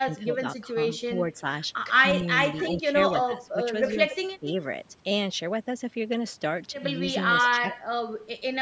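A speech recording with echo leak at 2.57–2.7, 3.24–3.35, 3.86–4.15 and 7.14–7.78 s: faint copies of the voice trailing by 280 ms, around 15–20 dB down, likely from a speakerphone's echo canceller letting some through. There's also speech suppressed in double talk at 2.77–2.95, 3.26–3.59, 4.4–4.46 and 7.64–8.57 s, where the voice dips by roughly 10 to 30 dB, likely the canceller ducking everything while both sides talk.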